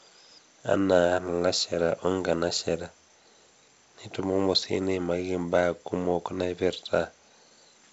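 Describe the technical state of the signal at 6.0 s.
At 6.0 s the speech is intact, carried by G.722 wideband telephone coding at 64 kbit/s with a top end reaching about 7.7 kHz and no fault present at that moment.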